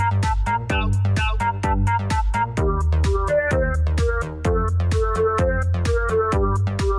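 Nothing to flag: no audible faults anywhere in the clip.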